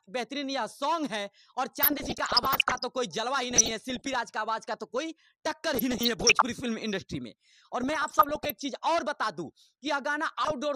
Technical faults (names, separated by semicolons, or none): DAB burbling